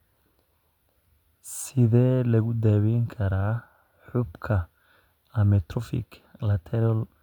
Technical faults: none

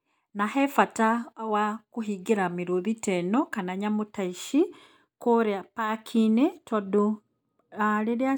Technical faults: none

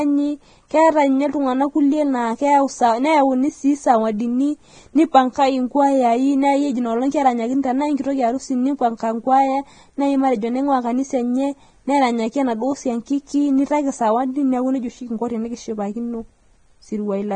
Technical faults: Vorbis compression

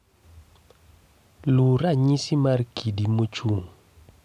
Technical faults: none

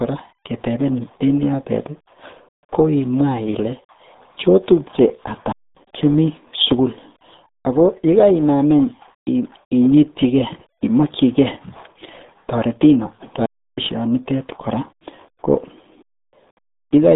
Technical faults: RealAudio 14.4 codec; playback stall

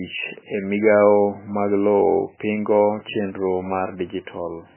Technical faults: MP3 compression

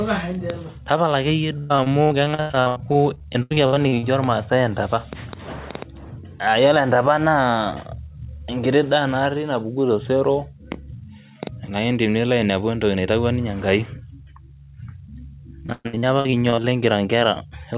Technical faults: repeated packet loss (robotic sound)

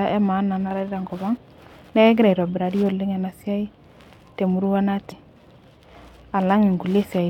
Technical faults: damaged data in a compressed stream

